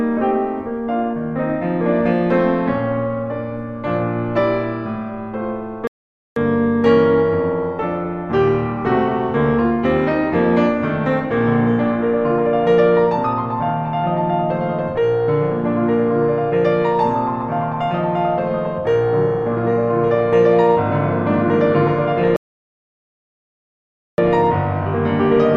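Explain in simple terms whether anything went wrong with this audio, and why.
The music stops twice because of a rebuffering stall. The player ran out of downloaded audio and waited for more. It goes silent at 5.87 s for about half a second, and at 22.36 s for about 1.8 s. Each time, the music picks up exactly where it stopped.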